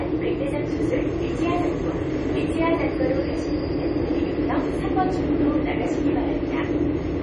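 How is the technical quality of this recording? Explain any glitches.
Technical quality is poor: heavy compression damage runs throughout the recording, and it sounds like MP3 compression, which is the likely cause. Nothing is present above 11.2 kHz, so the top end stops abruptly. Weak frequency components drop in and out from frame to frame, giving a watery, swirling texture with metallic chirps on bright, noisy parts of the sound, and transients are smeared. This pattern fits a low bitrate around 32 kbps, where the encoder runs short of bits, cuts the treble at a fixed point, and discards detail it judges inaudible.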